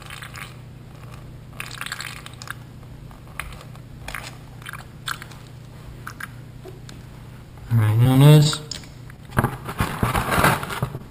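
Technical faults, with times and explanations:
7.85–8.78 s, repeated packet loss (robotic sound): eight separate holes open up across this stretch, the longest about 19 ms, with roughly 60 ms of real audio never arriving. Each time, the receiver patches the hole by extending whatever it last decoded, about 96 ms of patching in all, or roughly a tenth of the span. Because the patches come one after another, the sound turns choppy, with small pieces missing.
9.88–9.91 s and 10.11–10.15 s, short concealed packet loss: in each spot about 20 ms of audio failed to reach the decoder in time. The receiver invented a stand-in by continuing the preceding sound, using its pitch where there was one and shaped noise where there wasn't. It then crossfaded back to the genuine signal. The first patch covers about 13 ms and the second about 22 ms. Each is heard as a brief smear or wobble, and anything very short at those moments can drop out.
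10.97–11.02 s, short stall from a late packet: a packet was due but hadn't arrived, so the jitter buffer emptied. The receiver held the last sound for about 24 ms until the packet turned up, then carried on exactly where it had stopped. Nothing is lost, but playback now runs about 24 ms later. The stall is heard as a sound lingering slightly too long, with a faint buzz or dip before normal playback resumes.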